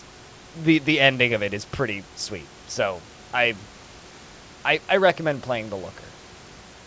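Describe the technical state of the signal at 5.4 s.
At 5.4 s the speech is intact, with only the band limit of the call codec, which leaves nothing above 8 kHz, and the faint room noise sitting about 28 dB below the speech.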